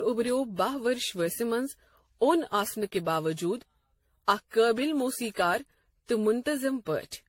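A speech clip that sounds swirly, hollow and smeared throughout, with blurred consonant attacks and nothing above 16.6 kHz. This is generation loss, likely from repeated AAC-LC re-encoding around 64 kbit/s, roughly seven passes, each stacking fresh quantisation noise and spectral holes.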